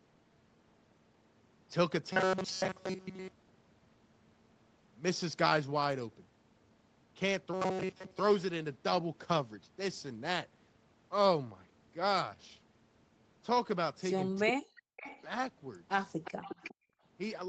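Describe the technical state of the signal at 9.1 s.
At 9.1 s the speech is intact, with no fault present, and it has the band-limited sound typical of a call path there.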